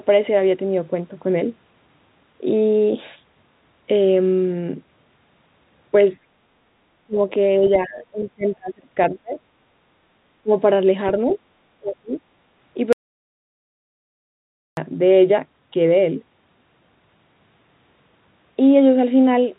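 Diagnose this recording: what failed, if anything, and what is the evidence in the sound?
Speech suppressed in double talk, likely in call processing: the talker dips about 10 to 30 dB at 6.15–6.24, 7.04–7.19, 7.58–9.37, 10.42–10.51 and 11.79–12.15 s. On a spectrogram these show as faded bands.

The other side's voice is leaking through, likely from the echo canceller, at 7.65–7.70 and 11.31–11.36 s, about 25 and 20 dB below speech. These appear as faint, brief spectrogram smears.

An audio dropout to silence from 12.93 to 14.77 s, likely a lost input, leaves 1.85 s of silence. The waveform shows a dead-flat line with no room tone.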